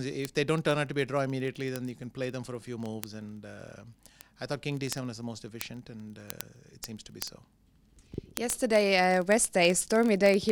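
Word clock ticks run from 0.12 s to the end: sharp ticks roughly every 30 ms, as an unlocked receiver clock, off by about 0.1%, slips one sample each time.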